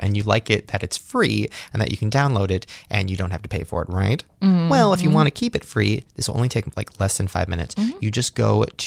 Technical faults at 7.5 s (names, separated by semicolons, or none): none